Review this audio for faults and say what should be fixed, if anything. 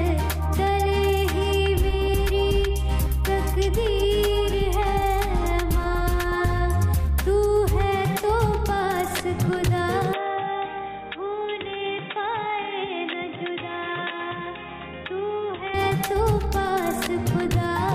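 From 10.13 to 15.74 s the sound goes dull and boxy, with nothing above 3.8 kHz, a drop of about 10 dB and a new noise floor sitting well below the signal, switching over with no gap. That's most likely the input switched to a poorer device. Locking the recording input to one chosen microphone, and keeping headsets from grabbing it mid-take, should stop this.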